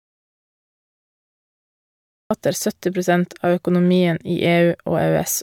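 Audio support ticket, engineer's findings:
Audio dropout to silence, 0 to 2.31 s, already under way at clip start. Silent gap, no room tone; speech enters mid-flow at 2.31 s. Likely input loss upstream (device disconnect, failed link or stray mute) while recorder kept writing silence. Content in gap unrecoverable.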